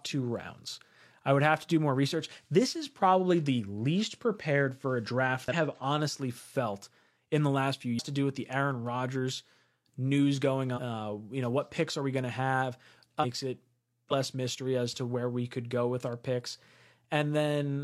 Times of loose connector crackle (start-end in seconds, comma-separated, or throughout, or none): none